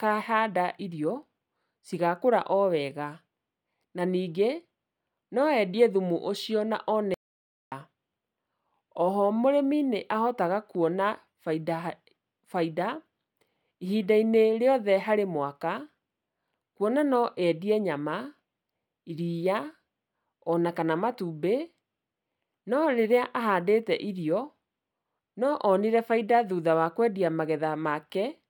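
At 7.14 s the speech cuts off abruptly and the track falls to silence, with no room tone underneath, until the sound resumes at 7.72 s. This is an audio dropout to silence lasting about 0.58 s. The flat, empty gap suggests the input signal was likely lost briefly, through a device disconnect, link failure or momentary mute, while the recorder kept writing silence. Whatever was spoken during that interval is not recoverable.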